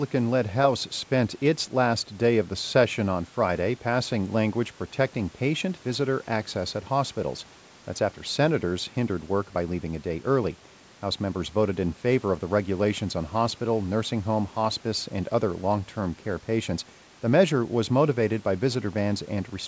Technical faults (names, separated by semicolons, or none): none